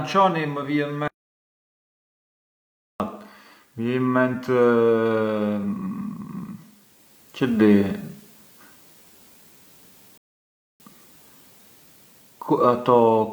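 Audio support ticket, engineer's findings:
Audio dropout to silence, 1.08 to 3.00 s. Speech cuts out mid-flow into dead silence, no room tone at all, then comes back already moving on. About 1.92 s of speech is gone for good. Likely the input side, a device dropping off or a link failing, with the recorder or encoder writing silence the whole time.

Rebuffering stall, 10.18 to 10.80 s. Speech halts, 0.62 s of silence, then resumes exactly where it stopped, so nothing's missing, just added time. Playback side: the player drained its downloaded audio and sat waiting for more data before carrying on.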